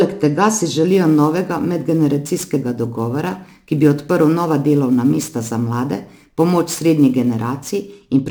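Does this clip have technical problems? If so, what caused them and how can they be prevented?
Yes, there's sample clock jitter from 0.88 s to 7.93 s. The converter's clock wanders by around ten microseconds, so samples land early or late, adding a gritty hiss roughly 25 dB below the speech that swells on loud, bright sounds. A stable, clean clock source prevents it.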